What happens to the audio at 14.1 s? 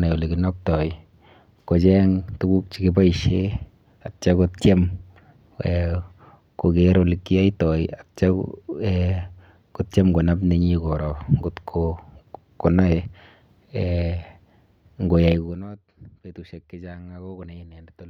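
Nothing goes wrong at 14.1 s: the speech carries on intact, with no dropout, click or sudden jump in level at that point.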